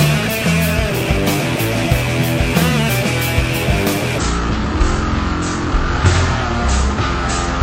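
From 4.18 s to the end at 7.62 s, a section at the wrong speed plays at 0.52x, dropping pitch roughly ten semitones; likely a clock mismatch in playback.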